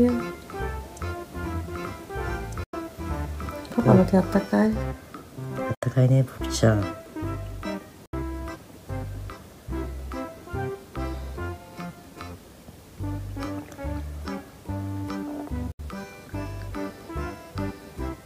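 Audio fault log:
0.00–4.66 s: doubled audio track. An equally loud copy runs about 1.5 s behind from the start, then stops abruptly. Likely caused by a second, slower capture path.
2.63 s, 5.75 s, 8.06 s, 15.72 s: Bluetooth dropout. Sharp silences of 93 ms, then 70 ms each, before the sound resumes further along. Likely caused by lost wireless packets, about three or four per gap.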